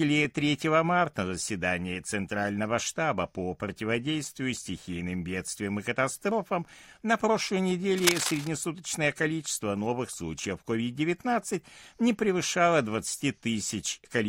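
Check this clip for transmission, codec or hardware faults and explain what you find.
One fault: cable scratch noise from 7.98 to 8.48 s, right after "катастрофам катастрофам на прошлой". For half a second, dense, irregular bursts of scratching noise ride over the speech at roughly its level. This is likely a worn cable or connector being moved, its contact resistance fluctuating rapidly.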